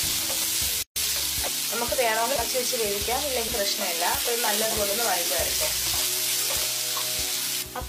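At 0.83 s the sound drops out for about 136 ms and resumes at 0.96 s, continuing exactly where it left off. This is a gap at a join of encoded pieces: two separately encoded segments were butted together untrimmed, so one run's end padding and the next run's start-up delay both survive as silence. On a waveform it shows as a flat, empty stretch with smeared edges; a spectrogram shows a vertical blank band with blurred edges.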